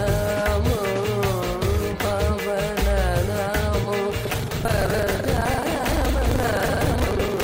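From 4.22 s to the end, a steady robotic rattle at about 23.4 Hz sits on the sound. This is buffer tearing: writer and reader have slipped, so roughly a third of each period, which fits a 2048-sample buffer, replays audio around 150 ms old.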